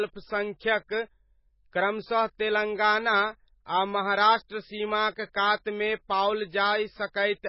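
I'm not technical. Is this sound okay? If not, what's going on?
No. The speech has a heavy case of what is likely MP3 compression, from start to finish. It sounds dull and muffled, because nothing above about 5.5 kHz survives. The encoder had very little data to work with, so it threw away the treble and the quieter details. Those details flicker in and out from moment to moment. That gives the speech a watery, swirly quality. S sounds turn metallic, and the starts of sounds are smeared.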